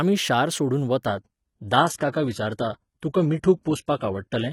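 At 1.06 s the speech drops abruptly to a lower quality and stays there until the clip ends. This is an adaptive stream at a lower bitrate. The connection slowed, so the player switched to a leaner version of the stream without any gap. From that point nothing is heard above 11.8 kHz. Codec artefacts increase. The character fits a move from roughly 96 kbit/s AAC to a 16 kbit/s HE-AAC stream.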